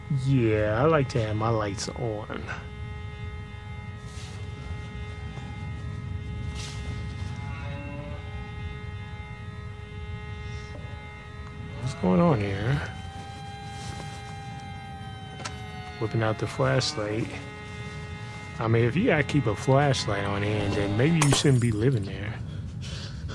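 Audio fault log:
No fault to log in this audio.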